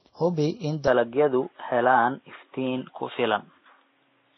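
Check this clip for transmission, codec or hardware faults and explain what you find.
Two faults stand out, one running through the whole clip and one starting early on.

From start to finish there's the sound of transcoding between lossy codecs. Nothing gets through above 6 kHz, and the smearing and swirly artefacts sound layered rather than from a single encoder. That's likely a chain of re-encodes, something like a 32 kbit/s MP3, then 96 kbit/s WMA, then a low-rate Vorbis pass. Each stage spends its bits re-coding the previous stage's damage and adds its own, so the mixed artefacts pile up on top of the 6 kHz ceiling.

At 0.88 s there's an input switched to a poorer device, and it stays that way to the end. There's no gap at the switch. The band suddenly narrows to nothing above 3.8 kHz, so the speech goes duller and boxier, and the level shifts by about 5 dB. A fresh noise floor sits well down, roughly 45 dB under the speech. 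This is likely the capture jumping to a different microphone or a headset call profile mid-recording.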